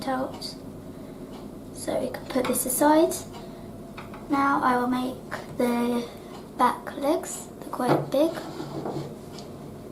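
At 2.07 s the quality suddenly steps down with no gap, and it stays that way until about 6.07 s: that's an adaptive stream at a lower bitrate. The connection slowed, so the player switched to a leaner version of the stream for those four seconds. The sound is consistent with Opus dropping from about 64 to about 24 kbit/s. Codec artefacts become more noticeable across that stretch before full quality snaps back.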